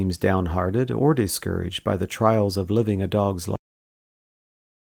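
At 2.53 to 2.55 s, between "discouraged by the trials" and "of living a dog's", there is a lost packet rebuilt from error correction. Twenty milliseconds came from a low-bitrate backup copy, which fits one missing packet. There is no gap, but that stretch sounds briefly rougher and noisier.

At 3.56 s, just after "of living a dog's", the clip has a cut-off end. The final buffers were never written out. The sound stops mid-utterance with no natural decay, then drops straight to digital silence for the rest of the clip.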